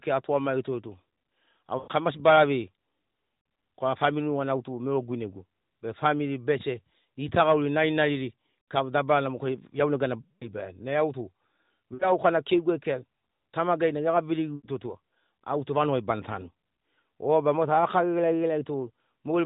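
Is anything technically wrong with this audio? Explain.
Yes, there are lost AMR speech frames, at six points in this narrowband mobile speech: 1.78 to 1.89 s, 3.40 to 3.46 s, 8.62 to 8.66 s (between "famili bese gitagauri narinariri" and "kika dabarana moke iaunegana"), 10.22 to 10.51 s (after "kika dabarana moke iaunegana"), 11.94 to 12.13 s (before "na keiguai kea tamagai"), and 14.56 to 14.68 s. The shortest, about 40 ms, is a quick dip or warble. The longer ones, up to about 180 ms near 10.2 s, drag the sound out and fade it toward silence, and the voice returns thin or rough. This happens when frames arrive corrupted by radio errors and fail their check. The decoder then keeps repeating its last good pitch and vocal tract settings while lowering the gain.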